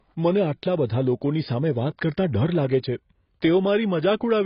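Throughout, the speech sounds dull, with nothing above 5.2 kHz, and sibilants and sustained sounds warble and smear. This is likely heavy AAC compression. Short of bits, the encoder lowered its cut-off and coarsely quantised what remained, which fits a bitrate near 16 kbps.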